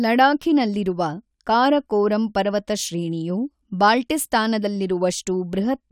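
No technical faults detected.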